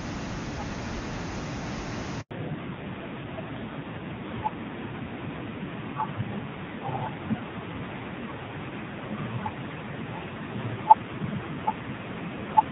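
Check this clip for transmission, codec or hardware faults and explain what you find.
Two transmission faults are present, both at the same moment in the call.

At 2.21 s there is a handover gap lasting 100 ms, to 2.31 s. The call switched between networks. No speech frames arrived while the new link came up. The voice fades out within a few tens of milliseconds. Then there is dead silence. Whatever was said in that tenth of a second is simply missing.

From 2.31 s to the end, the call shows a fallback to narrowband. Before the gap, the sound is clear wideband HD Voice, with faint or no codec damage, which fits AMR-WB near its top rate. After it, nothing above 4 kHz remains. The sibilants lose their edge, and the voice turns dull and muffled. It also sounds rough and grainy, which points to a low-rate AMR-NB mode of around 6 kbit/s.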